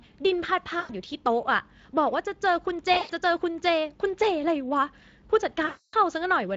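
Speex codec damage runs through the whole speech clip. A mid-rate CELP setting of roughly 20 kbps leaves the voice plainly noisy and hoarse.

VoIP packet loss concealed by the speech codec occurs at 0.79 to 0.91 s, 2.93 to 3.12 s and 5.65 to 5.95 s. Each time, the decoder extrapolates from its last pitch and filter, lowering the gain frame by frame. The 280 ms final gap is the longest.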